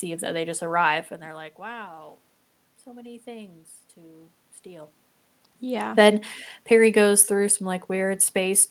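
No technical faults can be heard in the recording. Room noise sits under the speech, and the talker's level shifts around 1 s and again around 4.5 s as they move relative to the microphone.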